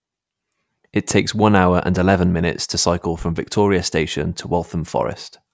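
Listening to the speech recording, nothing technical stood out as wrong at any point.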